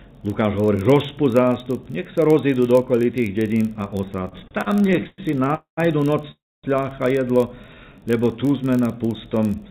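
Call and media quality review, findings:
Block size mismatch (padded), throughout: steady 46.9 Hz buzz from zero-filled tails in each block, which fits a 1024-sample read block; timing stretched only negligibly, speed 0.999x.

Repeated stalls (stutter), 4.28–5.50 s: 18 short concealment fills, longest 110 ms, about 29% of the span; jitter buffer repeatedly ran dry, last sound extended each time, audio drags and stutters with nothing lost.

Call audio freeze, 5.54–5.79 s and 6.31–6.65 s: sound held then fading to silence (120 ms, then 260 ms) before resuming where it stopped; likely packets delayed in transit emptying the jitter buffer, adding 230 ms and 321 ms of delay.

Jitter buffer slow-down, 7.56–8.20 s: audio runs at 88% speed, same pitch, 82 ms added by repeating pitch periods to rebuild the buffer reserve; G.711 mu-law band limit, nothing above 4 kHz.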